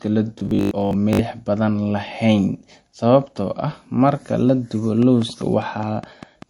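Speech clip, and three problems stack up. Across the whole thing there's the smeary, swirly texture you get from a low-bitrate MP3, yet the file itself is a much higher-bitrate MP3. That combination is low-bitrate audio saved at a high bitrate. The likely story is a 48 kbit/s encode re-saved at 192 kbit/s. The second pass bought file size but couldn't bring back the top end or undo the artefacts the first one baked in. From 0.39 to 1.21 s the speech turns into a stiff metallic buzz pinned at 50 Hz while still loosely tracking the syllables: robotic sound from repeated short buffers. A steady 50 Hz drone means the same 20 ms chunk being replayed over and over, which fits a 20 ms buffer. Around two-fifths of that stretch sounds like repeats rather than fresh audio, so real material is getting skipped, most likely because new audio was arriving too slowly and the playback side kept padding with the last chunk. 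Then from 5.02 to 6.43 s there's a train of clicks, a regular tick about five times a second, roughly seven pops in all. They poke out a few dB above the speech and sound alike each time, and they carry on between the words too. That points to something injecting pulses, likely electrical interference or a struggling interface.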